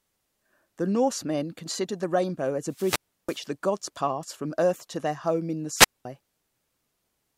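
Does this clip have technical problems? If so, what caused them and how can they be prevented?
Yes. Wireless microphone squelch dropouts occur at 2.67–3.50 s, after "considered the rainbow as", and 5.74–6.05 s, after "their home in the". Fading radio signal brings hiss, then the receiver mutes for 0.33 s and 0.21 s. Keep antennas in clear line of sight and close.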